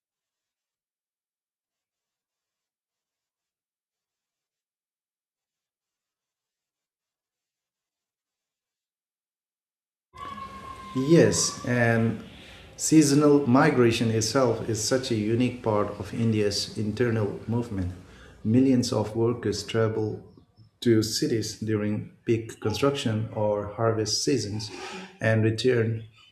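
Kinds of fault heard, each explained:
Nothing stood out on listening to this speech recording.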